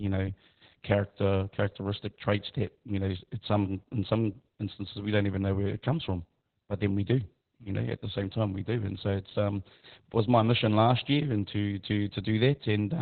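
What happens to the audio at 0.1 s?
At 0.1 s the speech already sounds muffled, hoarse and faintly robotic, as it does for the whole clip. This is Opus voice compression, heavy throughout. The codec is running its SILK linear-prediction coder in narrowband mode, so almost nothing above about 4 kHz survives, and the excitation is coded very coarsely in 20 ms frames. That buzzy, boxed-in quality fits a very low bitrate of around 8 kbps.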